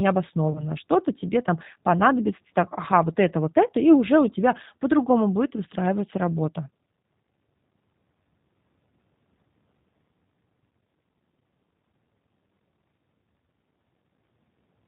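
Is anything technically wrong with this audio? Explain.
Yes, there are two faults.

The G.729 codec colours the whole recording. Speech is rebuilt from a vocal tract filter, a pitch predictor and a few pulses per subframe, which fits an 8 kbit/s codec. Nothing above 4 kHz survives, and the speech sounds plainly rough and synthetic.

VoIP packet loss concealed by the speech codec occurs from 0.52 to 0.67 s, consistent with a single lost packet covering about 30 ms. The decoder extended its last pitch and filter with decaying gain, so the sound turns briefly weak and takes a moment to recover.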